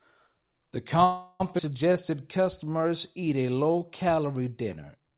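Speech over a narrowband call link, with everything above 4 kHz empty on a spectrogram, which fits G.711 A-law. From 1.04 to 1.42 s a call audio freeze stretches the last sound into a fading buzz for about 358 ms, shown as a smeared horizontal band, likely from delayed packets draining the jitter buffer. At 1.58 to 1.61 s a skip ahead drops roughly a fifth of a second, leaving an abrupt waveform splice with almost no gap. From 1.93 to 4.16 s a jitter buffer slow-down repeats pitch periods, adding 208 ms and playing at 91% speed, so harmonics stay level while syllables lengthen.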